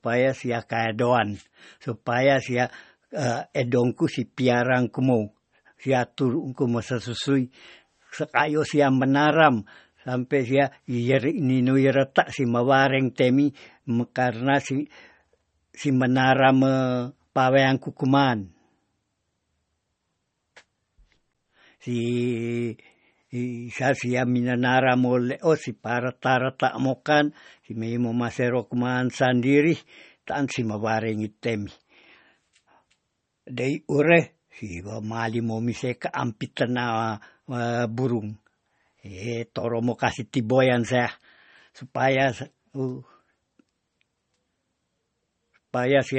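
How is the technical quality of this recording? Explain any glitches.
Quality's on the rough side, and the damage runs the whole way through. The audio has likely been through MP3 compression at a low bitrate, something in the region of 32 kbps. Nothing comes through above about 8.3 kHz, which is where the encoder chopped off the top end to save bits. Below that, it's been dropping the weaker frequency components and letting them flicker in and out between frames. That gives the speech a watery, swirly texture, with metallic chirps on the s sounds and smeared consonant attacks.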